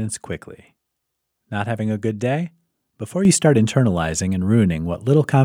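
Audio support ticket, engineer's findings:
Sudden gain jump at 3.25 s, holding to end: speech and noise floor step up together by about 7 dB, no ramp. Likely an unsmoothed gain setting or bit shift in the digital path.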